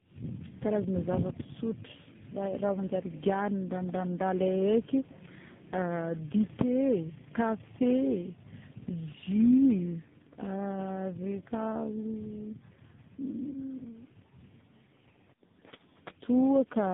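Tandem speech coding runs through the whole speech recording: the call appears to have crossed several links with different codecs, decoding and re-encoding at each handover, so every coder compressed the previous coder's damage. The result is consistent with three speech codecs in a row, ending in a low-rate AMR-NB stage. It sounds rough, muffled and warbly throughout, with nothing above 3.8 kHz.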